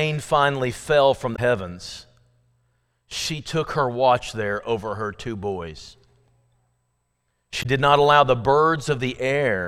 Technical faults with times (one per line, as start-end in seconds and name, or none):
1.32-1.39 damaged data in a compressed stream
7.59-7.66 damaged data in a compressed stream